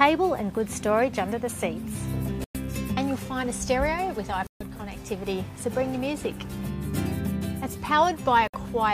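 Bluetooth dropouts at 2.44–2.57 s, 4.47–4.63 s and 8.48–8.56 s: the sound falls abruptly silent for 107, 137 and 61 ms, then resumes further along as though it had kept playing. This likely comes from wireless packets reaching the headphones too late and being discarded.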